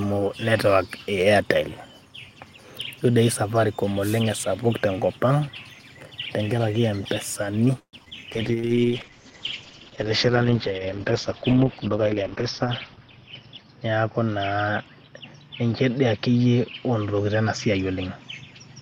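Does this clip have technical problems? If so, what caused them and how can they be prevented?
Yes. From 4.00 to 4.23 s there is a wireless microphone noise hit: a short swish of static over the speech as the FM radio link faded, letting receiver noise rise. Unlike a network glitch, nothing stretches or repeats; noise simply covers the sound. Better antenna placement or diversity receivers prevent it.

From 7.79 to 7.95 s the sound holds as a fading buzz, then about 90 ms of silence, and resumes where it stopped with nothing lost. This is a call audio freeze, likely from packets held up until the jitter buffer ran dry, inserting about 136 ms of delay. A steadier network path or a larger buffer target prevents it.

At 8.05–8.08 s and 8.10–8.13 s there is short concealed packet loss: brief smears where audio never arrived and the receiver extended the previous sound before blending back. Unlike the freeze, real audio is dropped. 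Forward error correction or a more stable connection prevents it.

From 8.33 s to the end there is a call bitrate drop. The speech turns rough and watery, and high frequencies are cut, with bandwidth falling from 20 kHz to 6 kHz. This fits a fall from about 32 to 8 kbps, with the worst stretch lasting about 4.4 s. Unlike momentary loss, it persists. More uplink headroom prevents it.

From 8.51 to 8.81 s there is a jitter buffer slow-down. The speech plays at 85% speed at unchanged pitch, drawn out by 51 ms of repeated pitch periods. This differs from a freeze, which stops the sound, not stretches it. Reducing network jitter prevents it.

From 12.14 to 13.65 s there is a jitter buffer speed-up. The speech runs at 109% speed, sounding hurried at the same pitch, as the receiver trims about 150 ms of excess buffered audio. Reducing delay spikes and packet bunching prevents it.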